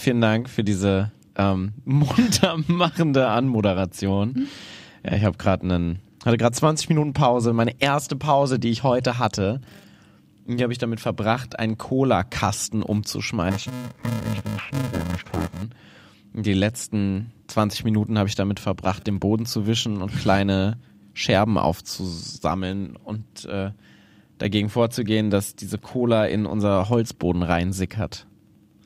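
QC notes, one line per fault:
13.50–15.62 s, interleaved audio read as planar: the speech turns dull and robotic with a 375 Hz buzz, which fits 2.67 ms blocks, roughly 128 samples, split into false channels.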